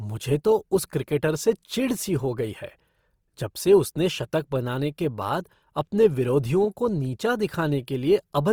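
Speech sounds rough and grainy throughout, though the top still reaches 20.3 kHz. The likely cause is Opus compression, its music mode filling starved bands with noise at a low bitrate near 24 kbps.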